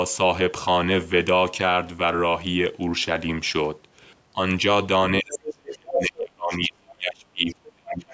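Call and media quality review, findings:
Speech suppressed in double talk, 5.2 s to end of clip: talker level drops by up to about 35 dB over roughly 3 s. Likely the echo canceller ducking both sides while it cannot separate talker from loudspeaker echo. Waveform shows collapsed, patchy envelope; spectrogram shows thinned, broken energy bands.

Other side's voice leaking through at 5.33–5.54, 5.70–5.74, 5.93–6.22, 6.54–6.70 and 7.48–7.54 s: short scraps of a second voice, loudest at 5.93–6.22 s (about equal to the talker), otherwise well below it and fading to faint. Likely residual echo the canceller failed to remove from the microphone. Spectrogram shows brief foreign harmonic traces inside the ducked region, all under the normal 8 kHz call-band ceiling.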